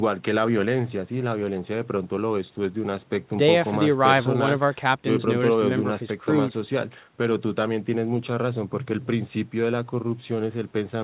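No technical faults can be heard in the speech, which comes through a call path whose band ends at 4 kHz, consistent with G.711 mu-law coding at 64 kbps.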